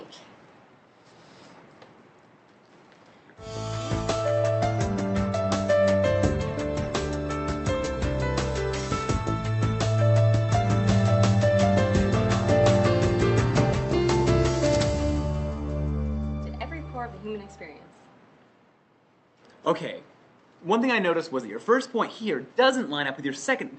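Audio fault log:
10.49–13.73 s, doubled audio track: a second full-band copy of the sound runs about a second behind the original and about 5 dB quieter, so everything is heard twice. It's dry, with no decay or room colour, and it cuts in and out abruptly at both ends, which likely means it was captured again by a slower path rather than reflected acoustically. The highs above roughly 8 kHz are trimmed by the call codec on both copies.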